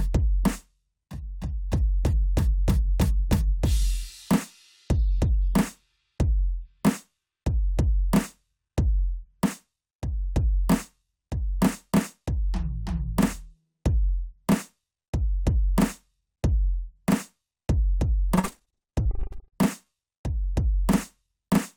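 Music, with repeated packet loss (robotic sound) from 18.35 to 19.56 s: rapid holes of up to 43 ms, each patched by stretching the last sound, so nearly half that stretch is filler. Unlike one isolated dropout, the constant recurrence produces a choppy stutter.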